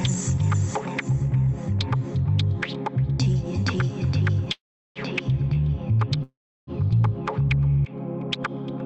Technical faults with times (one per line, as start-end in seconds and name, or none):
4.52-4.99 call audio freeze
6.23-6.70 call audio freeze